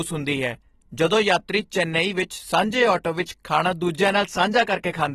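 The clip is speech, and the whole of it carries audible codec damage. The top of the spectrum stops abruptly, with nothing above 13.8 kHz. The sound is dull and smeared. Sustained vowels and sibilants take on a warbling, fizzy texture. This is likely AAC compression, in the AAC-LC form, at a low bitrate around 29 kbps. At that rate the encoder lowers its cut-off and quantises the remaining bands coarsely, leaving gaps that the ear hears as swirling noise.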